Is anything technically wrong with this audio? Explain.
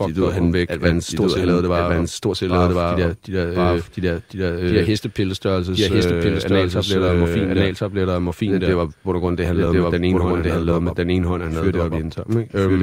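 Yes. A doubled audio track runs throughout. A second, equally loud copy of the speech trails about a second behind. It likely comes from a slower capture path.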